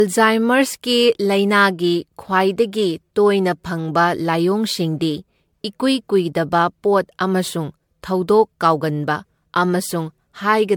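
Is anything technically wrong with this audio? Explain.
Yes. Generation loss runs throughout this speech clip, likely from around seven successive MP3 passes near 100 kbit/s, stacking smeared, swirly, hollow artefacts, blurred attacks and nothing above 19.9 kHz.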